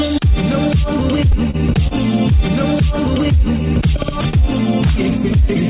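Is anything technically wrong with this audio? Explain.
Yes. There are two short stalls from late packets and one jitter buffer slow-down. The audio runs through a narrowband call path with nothing above 4 kHz, which fits G.711 A-law at 64 kbps.

Short stalls from late packets occur at 1.51 to 1.56 s and 1.88 to 1.93 s. Each time a packet had not arrived when it was due, the jitter buffer ran dry, and the receiver extended the last sound for roughly 29 to 30 ms until the data showed up. Playback then resumed from the same point, so nothing is lost, but each stall pushes the delay about 30 ms later. What you hear is a sound held slightly too long, with a faint buzz or dip.

A jitter buffer slow-down runs from 3.21 to 3.64 s. The buffer was low or had just raised its target delay, so the receiver built up reserve by repeating single pitch periods or fragments of pauses many times in a row. 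This adds about 46 ms over that span and brings playback down to 92% speed. The pitch stays the same, but sounds are drawn out and there may be a slight warble.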